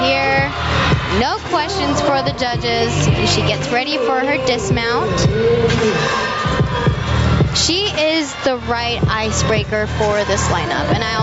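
Throughout, the gain is pulled down on each loud sound, a swing of roughly 15 dB that squashes the level. This is gain pumping, likely from input gain set far too high and a fast limiter clamping down, heard within a band that stops at 8 kHz.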